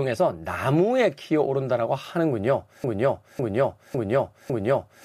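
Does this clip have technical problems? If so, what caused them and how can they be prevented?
Yes. From 2.84 s to the end, the speech falls into a broken-record loop: a 0.55 s fragment repeats back to back four times, and whatever should have played there is gone. A stalled player or stream likely kept resending its last buffer. Watchdog checks that flush stale buffers on stalls would prevent it.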